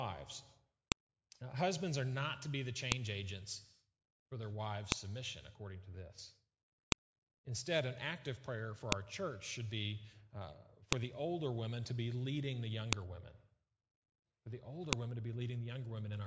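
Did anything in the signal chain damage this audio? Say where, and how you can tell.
Yes: sharp clicks at 0.92, 2.92, 4.92, 6.92, 8.92, 10.93, 12.93 and 14.93 s, every 2 s, are file headers played as audio where storage-joined 2-second WAV pieces kept their header bytes.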